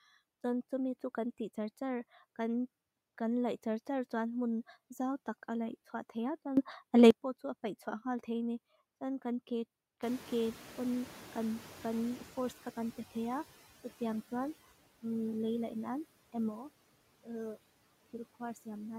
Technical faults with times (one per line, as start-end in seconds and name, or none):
0.00-18.99 noise suppressor artifacts
6.57-7.11 sudden gain jump
10.02-13.47 noise suppressor catching up
16.49-18.99 sudden gain jump